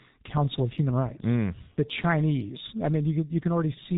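Speech run through the G.723.1 codec the whole way, and it's been hit hard: everything above 4 kHz is gone, so it sounds muffled and hoarse, and consonants smear because the voice model only updates every 30 ms frame, which fits a rate around 6.3 kbit/s.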